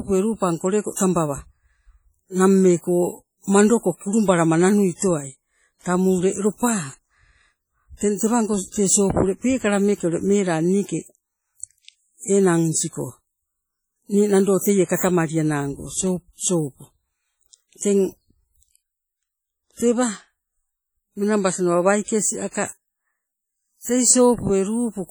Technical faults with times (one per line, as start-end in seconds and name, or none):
0.00-25.11 WMA compression